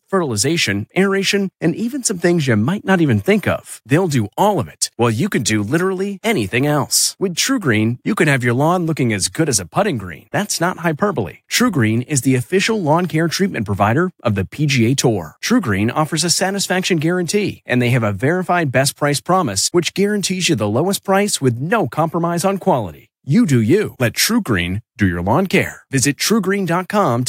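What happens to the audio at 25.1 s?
At 25.1 s the speech sits inside a drift correction step running from 24.00 to 25.45 s, just after "do you": playback slows by 5.4% and pitch drops about 96 cents, near a semitone, likely from a clock-matching rate change. On a spectrogram the harmonics step down about 5%, then jump back at 25.45 s.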